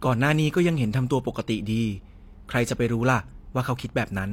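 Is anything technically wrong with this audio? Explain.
Yes. Throughout, there is low-bitrate audio saved at a high bitrate: the speech keeps the artefacts of a heavy first encoding, likely from around 32 kbit/s HE-AAC later resaved as 192 kbit/s MP3, which cannot restore the lost detail.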